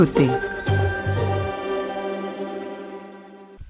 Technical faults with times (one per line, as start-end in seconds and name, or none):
none